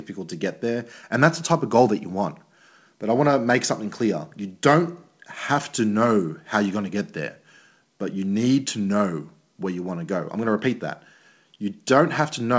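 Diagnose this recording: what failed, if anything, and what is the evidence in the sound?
Nothing failed; the speech passes through without faults.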